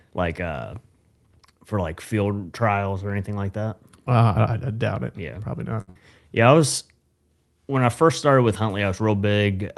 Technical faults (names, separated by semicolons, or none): short stall from a late packet; burst of packet loss